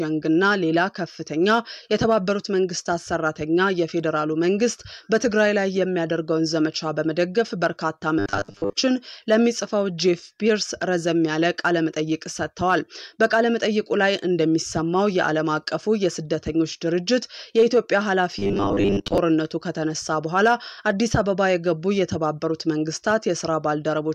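At 8.19 to 8.73 s and again at 18.39 to 19.18 s the sound goes robotic, a stiff metallic buzz at 100 Hz. That's likely robotic sound from repeated short buffers: roughly half the audio is replaced by 10 ms chunks looping over the skipped material.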